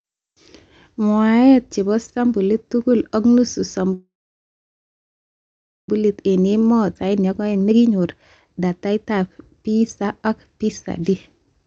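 Just after "tugul ak nusu", from 3.93 to 5.89 s, the sound stops: a brief buzzing continuation of the last sound fades into about 1.78 s of silence, then resumes where it left off. This call audio freeze is likely from delayed packets draining the jitter buffer, inserting a roughly 1.95 s gap.

From 6.02 to 8.05 s the speech runs hurried at unchanged pitch, about 123% speed. This jitter buffer speed-up comes from the receiver trimming many short pitch-period slices, about half a second in total, to work off the backlog.

Between 6.94 and 6.96 s, inside that stretch, playback jumps forward with almost no gap. This skip ahead drops around a second of audio outright, splicing the two sides nearly directly.

Two more jitter buffer speed-ups follow. From 8.59 to 9.25 s the speech runs at about 126%, losing roughly 150 ms. From 9.67 to 11.15 s it runs at about 114%, losing around 200 ms. Both sound rushed but keep their pitch. 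Throughout, the Opus call path's 8 kHz bandwidth limits the top end.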